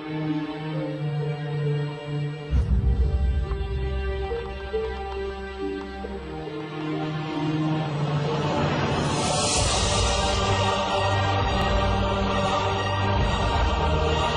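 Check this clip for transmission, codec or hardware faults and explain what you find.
One hardware-related fault runs through the clip. From 0.28 s to 14.35 s there are clock slip clicks: faint regular ticks roughly every third of a second, around fifty in all. These are likely from two unsynchronised clocks differing by around 100 ppm, so a single sample is dropped or repeated each time. On a spectrogram they appear as evenly spaced thin vertical lines, and on the waveform as tiny one-sample steps.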